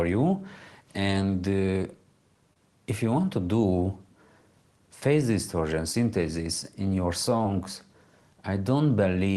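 Short concealed packet loss at 2.53–2.56 s, 5.92–5.94 s and 7.43 s: brief missing stretches were filled by extending the preceding sound, giving quick smears rather than silent gaps.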